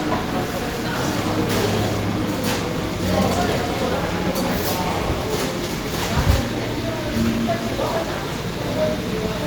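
Around 3.93 to 3.95 s there's a skip ahead. A chunk of audio, something like 0.4 s of it, never gets played, either because it was lost in transit or because the jitter buffer overflowed and tossed it while newer audio was already queued. Nothing fills the hole, so the sound just lurches forward, with the material on either side butted almost straight together. You hear an abrupt jump rather than a gap, and the latency drops by roughly the same amount.

From 4.85 to 5.76 s you get a jitter buffer speed-up. The buffer is sitting on more audio than it wants, so the receiver trims it back by snipping out tiny slices, one or a few pitch periods each, over and over across that stretch. In total it shaves off around a twentieth of a second, and playback runs at about 104% speed. The pitch stays put while it runs a little faster for just under a second.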